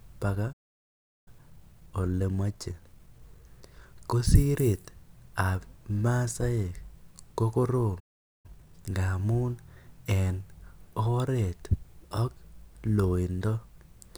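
At 0.52 s the speech cuts out and the line stays silent until 1.28 s, a gap of about 0.74 s. This is a playback stall, likely the player running out of buffered data or its audio thread being held up, so nothing reached the output. From 1.28 s to 4.28 s the speech runs slightly hurried, at 1.1 times normal speed, with its pitch unchanged. That is time-compressed catch-up: the player trims its backlog by removing short slices and cross-fading the joins. A second playback stall follows just after "ko korom", silencing the speech from 7.99 s to 8.46 s, roughly 0.44 s. Its catch-up, from 8.46 s to 8.90 s, is far more aggressive at twice normal speed, so the words sound rushed.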